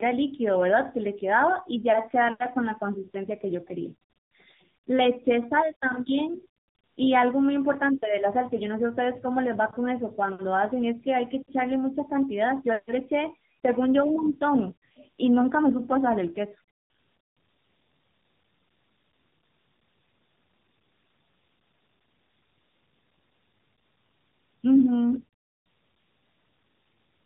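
From start to finish the speech carries tandem speech coding. It passed through two narrowband speech coders in a row, with the second rework most likely at a lower rate than the first. The voice sounds muffled, rough and warbly. On a spectrogram, energy stops at a flat ceiling near 3.8 kHz, and the harmonics look smeared and blotchy rather than cleanly striped. The waveform shows no dropouts or clipping to mark the damage.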